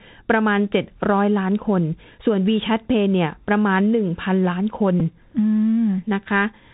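Throughout, the speech carries plainly audible damage from the Bluetooth CVSD headset codec, which fits a 64 kbps CVSD link. The one-bit delta coder tracks the waveform in adaptive up/down steps, so s sounds turn scratchy and a granular hiss sits underneath. On a spectrogram, energy stops sharply at 4 kHz, with grainy noise filling the band below.

At 5.00 s a Bluetooth headset packet repeated. After about 7.5 ms of audio went missing, consistent with two lost packets, the decoder replayed the previous packet's data. This is heard as a brief buzz near 267 Hz until good packets return. The waveform shows a short repeated segment with a small discontinuity at its edges.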